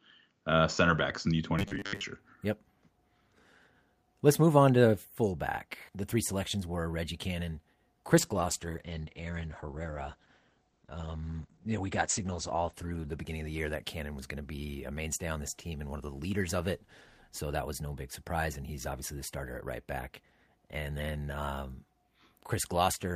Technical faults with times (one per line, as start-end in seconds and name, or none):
1.59-2.04 robotic sound from repeated short buffers
8.19-14.31 call bitrate drop